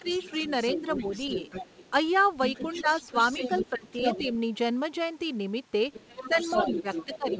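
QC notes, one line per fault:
0.0–1.44 s, 2.81–3.04 s, 3.37–4.34 s and 6.2 s to the end: speech suppressed in double talk. The speech level dips by about 10 dB, and by about 15 dB in the 3.37 s stretch, in pieces rather than continuously. Roughly 0.4 s of the first span, a brief 0.15 s patch and about half a second of the third span are affected. The likely cause is an echo canceller that could not separate the near talker from loudspeaker echo while both sides spoke, so it turned both down.
0.07–4.28 s and 5.93 s to the end: other side's voice leaking through. A second voice sits under the talker, about 10 dB below it in the first span and only about 5 dB below in the final one. It is most likely residual echo: the far side played through the talker's loudspeaker and picked up again by the microphone, with the canceller leaving part of it in. Like the rest of the audio, it stops at 8 kHz, which fits a G.722 call path.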